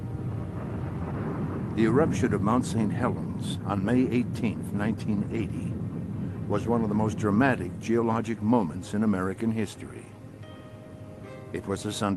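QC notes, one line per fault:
No faults heard in this clip.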